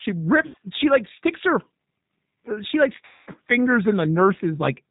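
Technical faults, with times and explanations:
Throughout, G.729 codec: the speech is squeezed through an 8 kbit/s coder, which fits G.729A, rebuilding each 10 ms frame from a vocal tract model, a pitch predictor and a handful of pulses. Nothing above 4 kHz survives, so the speech comes across plainly rough and synthetic.
0.46 to 0.57 s, VoIP packet loss concealed by the speech codec: about 80 ms of audio went missing, which points to four lost packets. The decoder stretched its last pitch and filter and faded them out, giving a short buzzy or noisy smear.
3.05 to 3.32 s, VoIP packet loss concealed by the speech codec: a longer gap, about 220 ms, consistent with eleven lost packets. The extrapolated sound fades out, and since each frame leans on the last, the speech stays weak or distorted for a while after packets return.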